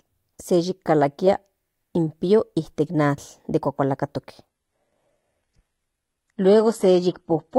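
From 4.48 s to 7.58 s, an adaptive stream at a lower bitrate takes over without a gap. The speech suddenly loses everything above 11.9 kHz, which fits a low-rate HE-AAC stream.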